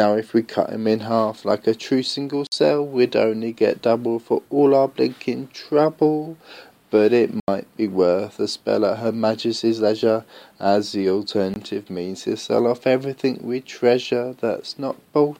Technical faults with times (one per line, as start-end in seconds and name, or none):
2.47-2.52 block of digital silence
7.40-7.48 block of digital silence
11.54-11.56 block of digital silence